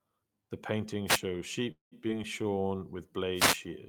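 The radio link of an analogue FM wireless microphone fades twice in this short speech recording, when reflected copies of the signal partly cancel the direct one. Receiver noise then rises above the wanted signal. This wireless microphone noise hit is heard as a brief swish of static over the speech from 1.06 to 1.19 s and again, longer, from 3.34 to 3.60 s. Between those, packets in the call path were likely held up long enough for the jitter buffer to run dry, producing a call audio freeze from 1.71 to 1.94 s. The receiver stretches the last sound into a fading buzz for about 200 ms, of which roughly 130 ms is near silence, and then resumes exactly where it stopped, so nothing is lost but a gap of about 200 ms is inserted and the delay grows by that amount. Shortly afterwards, at 2.08 to 2.11 s, a skip ahead throws away around 70 ms of audio that was already waiting, bridged by only about 9 ms of fill, so playback jumps forward and the two sides of the cut are joined almost directly, pulling the delay back by around 50 ms. 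From 2.43 to 2.68 s the buffer builds reserve with a jitter buffer slow-down, repeating single pitch periods to add 50 ms. The speech plays at about 83% speed with unchanged pitch, so sounds are drawn out and may carry a faint warble.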